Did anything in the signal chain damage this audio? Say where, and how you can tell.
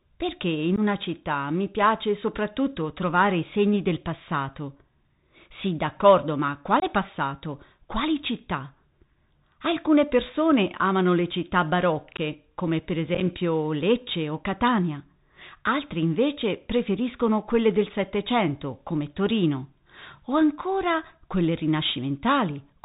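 Yes. At the codec stage, the whole clip of speech shows a Bluetooth CVSD headset codec at 64 kbps. Nothing above 4 kHz survives. S sounds come out scratchy, and a granular hiss sits under the voice. Loud, bright passages distort because the one-bit up/down steps can't keep pace with the waveform, even though the step size adapts. The damage is plainly audible throughout.

The radio link between headset and phone also shows unconcealed Bluetooth headset packet loss. There is a 15 ms hole at 0.76 s, between "perché in" and "una città mi piace". A 22.5 ms hole follows at 6.80 s, and another of 15 ms at 12.17 s, after "persone amano le città". Just after "come per", at 13.15 s, about 22.5 ms of losses are scattered over 60 ms, with no gap longer than 7.5 ms. Each gap has abrupt edges, which fits roughly two or three lost voice packets replaced with silence. Nothing filled the gaps in, and the CVSD decoder comes back quieter for a moment after each one.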